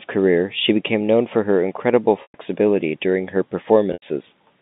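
At 2.22 to 2.34 s, after "known for her incrededible", and at 3.93 to 4.02 s, after "during her", there is packet loss with pitch repetition. Gaps of 120 ms and 90 ms, consistent with several 30 ms packets, are bridged by repeating the last pitch period, so the sound holds on a buzzy, fading tone rather than cutting abruptly to silence.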